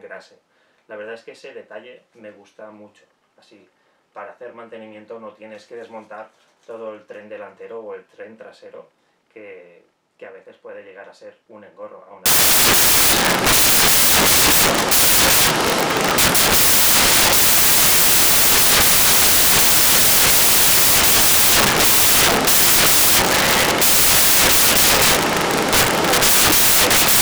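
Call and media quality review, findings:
Samples built from the wrong bytes, 12.26 s to end of clip: audio replaced by loud broadband noise, close to white on loud sounds. Probable component: decoder/sample reader. Byte offset or swapped byte order promotes fast-changing low bits into the most significant part of each sample.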